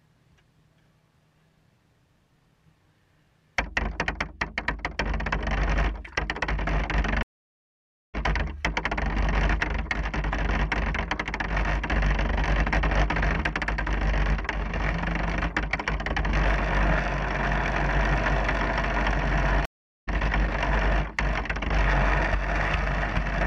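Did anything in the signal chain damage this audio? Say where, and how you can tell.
Yes: stream reconnects at the network stage. The link dropped, leaving silence at 7.23–8.15 s and 19.65–20.08 s, then a fresh decoder resumed about half a second further along.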